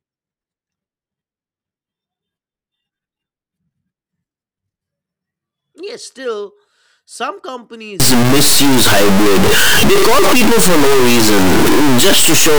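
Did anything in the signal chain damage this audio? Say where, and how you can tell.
Yes. From about 8.00 s, just after "still some", to the end, the speech turns harshly buzzy and pauses fill with loud noise. This points to a stuck bit, likely in the converter or its data lines, forcing a high bit that shifts samples by around -5 dBFS.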